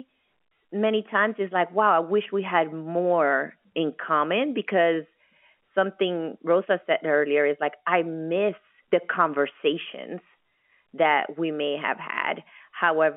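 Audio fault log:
Nothing stood out on listening to this speech, which comes through its G.711 telephone coding as a narrow, phone-line sound.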